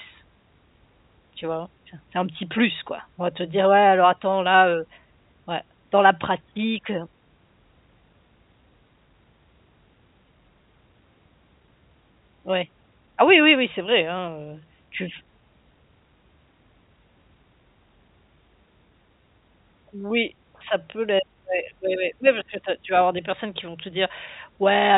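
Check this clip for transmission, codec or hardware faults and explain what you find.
No transmission, codec or hardware faults turn up in the clip.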